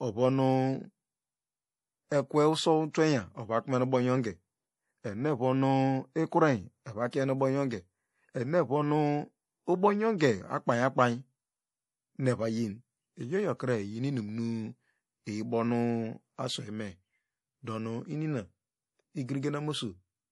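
Speech, about 20 seconds long, with audible codec damage all the way through. The treble stops dead at 11.5 kHz, and the quieter high detail flickers in and out. That gives a watery, swirly texture, with metallic chirps on s sounds and soft, smeared consonant attacks. This is likely MP3 compression running short of bits, and the damage fits a low bitrate of around 48 kbps. Pre-echo appears from 10.18 to 10.21 s. A short hiss spreads over roughly 22 ms just before a sharp attack, and the onset sounds blurred. The codec spread its quantisation noise across the whole block, so noise meant for the loud part leaked into the quiet moment before it.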